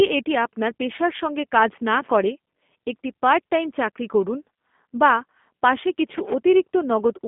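The speech sounds thin, slightly rough and synthetic from start to finish, with nothing above 3.6 kHz and a narrow band of about 200 Hz to 3.5 kHz. This is G.729 codec damage: each short frame is rebuilt from a vocal tract model, pitch prediction and a few pulses, which fits an 8 kbit/s VoIP link.

From 1.99 to 2.12 s, between "পেশার সঙ্গে কাজ না" and "করে একটি পার্ট টাইম", an irregular burst of scratchy crackle lasting about 130 ms cuts across the speech. This is loose connector crackle: a worn or dirty contact repeatedly breaking and remaking, chopping the signal into fragments.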